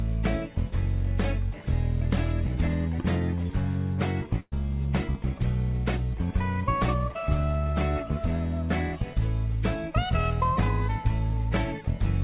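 A burst of packet loss runs from 4.40 to 4.54 s. A run of audio around 120 ms long never arrived in time to be played, so the receiver stretched the last sound it had across about 116 ms, fading it as the gap wore on, before roughly 20 ms of silence. The audio then picks up further along with that stretch gone. Throughout, the sound stops at 4 kHz, which fits a narrowband call codec such as G.711.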